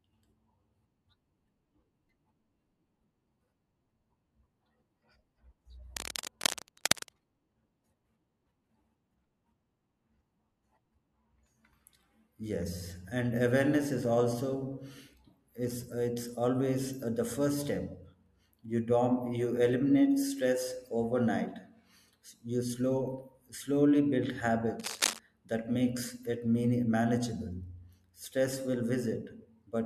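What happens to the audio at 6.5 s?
At 6.5 s the speech is overlaid with cable scratch noise, which runs from about 5.96 s to 7.09 s: dense, irregular crackling and rustling, only slightly quieter than the speech itself. The likely cause is a worn cable or connector being moved, its contact resistance fluctuating rapidly. On a spectrogram this shows as ragged broadband smears stretched across that second; the waveform carries jagged, uneven bursts on top of the speech envelope.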